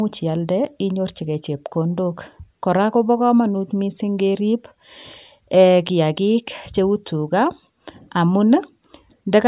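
Nothing stood out as a technical problem on listening to this speech recording.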